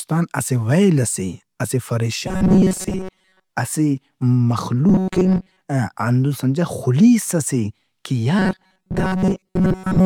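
A speech clip with robotic sound from repeated short buffers at 2.28–3.49 s, 4.89–5.61 s and from 8.39 s after "ئس اے کہ" to the end: a rigid metallic buzz fixed near 188 Hz, likely from a roughly 5 ms fragment replayed most of the time. Unlike choppy dropouts, the gaps are filled with repeats rather than silence.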